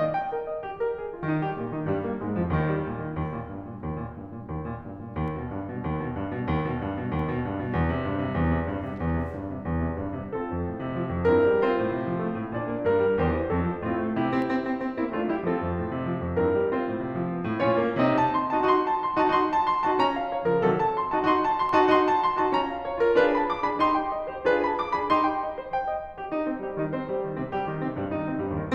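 Sharp single clicks at 5.28, 7.19, 14.42 and 21.69 s in the music are likely dropped samples. A fraction of a millisecond goes missing, so the waveform steps abruptly to a later value, and each click shows as a thin vertical line across the spectrogram.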